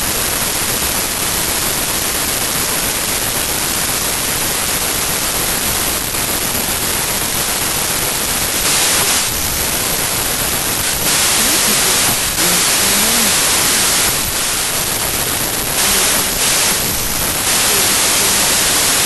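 From start to finish the speech is buried in loud, harsh noise: a wrong sample width, where audio written as 32-bit integers is read as packed 24-bit samples. Each decoded value takes its bytes from the wrong positions, and only some carry the real signal's top bits. The speech also plays at 0.75 times its proper speed, lower in pitch. A plain sample-rate mismatch would slow and lower the speech while leaving it clean. The heavy noise points to the byte misalignment.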